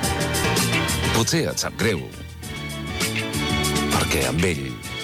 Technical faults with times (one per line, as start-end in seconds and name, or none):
0.44 dropped buffer (overrun)
2.56 dropped buffer (overrun)
3.72 dropped buffer (overrun)